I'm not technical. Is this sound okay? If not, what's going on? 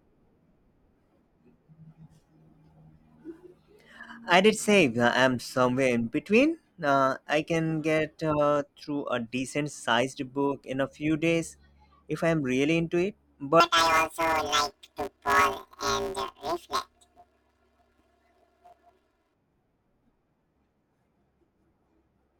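No. From 13.60 to 19.34 s the speech turns into a robotic buzz at about 172 Hz. That's planar audio read as interleaved: each 5.8 ms block, which fits a 256-sample block, stores left then right but is read as alternating pairs.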